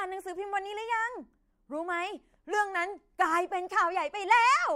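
A speech clip with a drift correction step. From 2.54 s to 3.22 s the sound slows by 6% and drops 107 cents, about a semitone. It then snaps back. Clock-matching software likely changed the playback rate in one step to correct its buffer.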